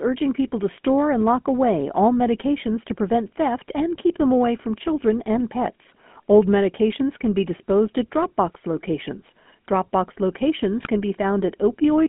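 GSM full-rate codec, throughout: the speech runs through the original GSM coder, which models the vocal tract and excites it with a regularly spaced pulse train keeping only every third excitation sample. The damage is plainly audible as a buzzy, gravelly roughness on the voice. The line passes only about 200 Hz to 3.5 kHz, giving a thin, boxy tone, and the character fits a 13 kbps full-rate stream.

GSM bit errors, 10.80 to 10.87 s: for about 70 ms the decoder receives corrupted parameters, as on a weak radio link. Flipped bits in the filter, pitch or gain values distort the spectrum or spike the level frame by frame, and the voice breaks into a short squawk and gargle. The length of the burst points to roughly four damaged frames, consistent with an error rate near 2 percent.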